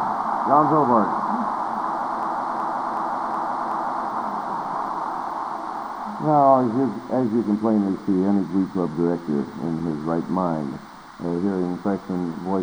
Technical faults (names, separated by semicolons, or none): system hang loop